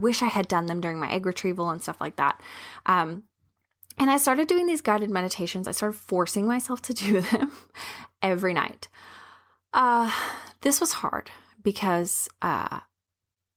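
No faults are audible anywhere in the speech recording.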